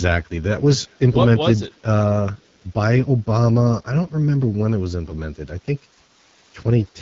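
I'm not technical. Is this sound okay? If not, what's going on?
No. The whole clip has passed through the AMR wideband (HD Voice) codec, the phone-network system that squeezes speech into a very small data stream. Here it runs at one of its lowest settings, so the speech has a rough, raspy edge from start to finish. The codec rebuilds the voice from a simplified model instead of keeping the real sound, and nothing above about 7.5 kHz survives, which dulls the crispness.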